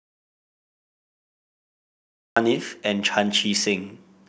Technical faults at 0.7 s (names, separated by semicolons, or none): audio dropout to silence